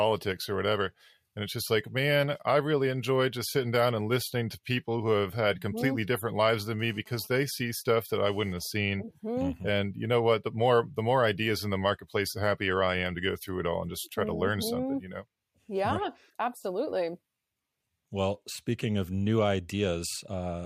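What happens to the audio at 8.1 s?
GSM phone buzz, 6.79–8.68 s: a phone's rectified data-transfer bursts add a raspy 217 Hz buzz about 30 dB down, showing as evenly spaced harmonic lines.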